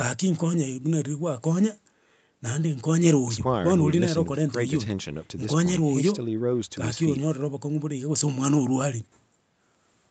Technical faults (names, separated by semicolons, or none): none